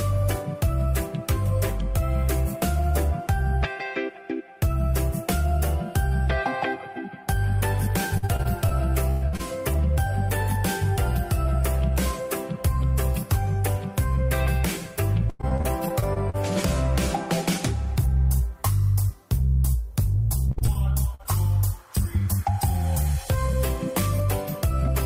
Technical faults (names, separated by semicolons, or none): repeated packet loss (robotic sound); burst of packet loss; short concealed packet loss